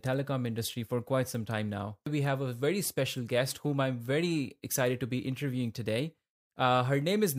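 No technical faults can be heard anywhere in this speech recording.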